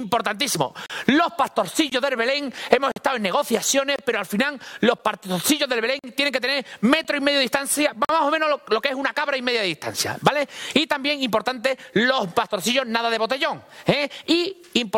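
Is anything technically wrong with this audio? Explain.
Yes. Gaps between stream segments occur at 0.86, 1.90, 2.92, 3.96, 4.98, 5.99, 7.04 and 8.05 s, roughly once per 1 s segment. Each of these segment boundaries leaves a timing gap, filled with silence lasting 8 to 47 ms, heard as abrupt, hard-edged dropouts.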